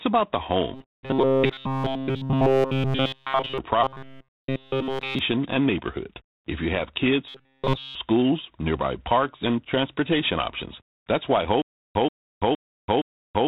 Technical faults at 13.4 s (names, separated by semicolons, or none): G.726 ADPCM; stutter with silent gaps